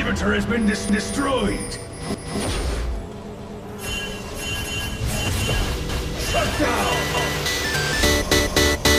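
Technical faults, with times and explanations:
0.89–1.14 s, 2.14–2.39 s, 3.39–3.64 s, 4.64–4.89 s, 5.89–6.14 s, 7.14–7.39 s, 8.39–8.64 s: overlapping chunks. The audio was handled in 1.0-second chunks, each starting 250 ms before the previous one finished, so a quarter-second of sound replays at every join, heard as a stutter every 1.25 s. Unlike a dropout, nothing goes missing. Unlike random glitches, the repeats are strictly periodic and the same length each time.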